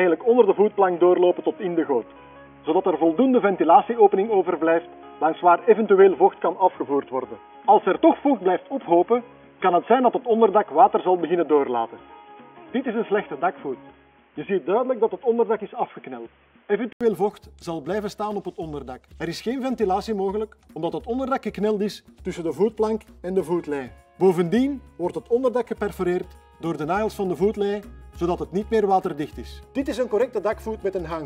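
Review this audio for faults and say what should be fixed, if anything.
From 0 to 17.01 s the sound is boxy, with nothing above 3.4 kHz, likely from an input switched to a poorer device. The spectrogram's hard ceiling lifts after an 80 ms waveform gap.

Lock the recording input to one device and disable automatic switching to headset call profiles.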